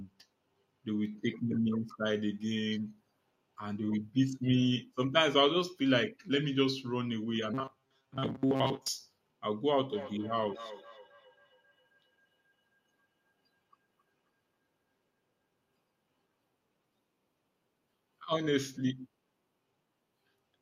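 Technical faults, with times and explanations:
7.54–8.89 s, robotic sound from repeated short buffers: the speech collapses into a rigid metallic buzz near 134 Hz that still loosely tracks the syllables. This is likely a starved audio stream replaying roughly 7.5 ms chunks for most of this stretch. Unlike pitch-shifting, the tone stays locked regardless of intonation.
9.75–16.51 s, feedback echo between two devices: each phrase returns about a third of a second later, at about 18 dB below the speech, sounding thinner and more ringing on each pass. A second device's speaker is feeding another's microphone. Unlike room reverberation, the repeats are distinct and evenly spaced.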